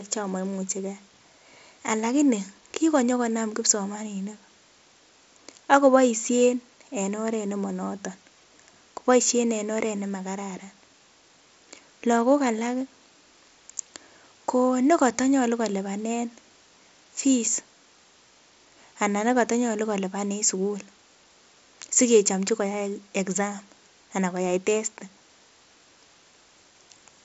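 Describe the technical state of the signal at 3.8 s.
At 3.8 s the speech comes through intact, with no fault at that moment, carried over a Bluetooth mSBC headset link whose band stops at about 7.7 kHz.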